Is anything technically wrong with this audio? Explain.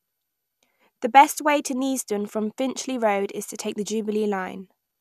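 No, nothing is technically wrong with this speech recording. No technical fault can be heard anywhere in it.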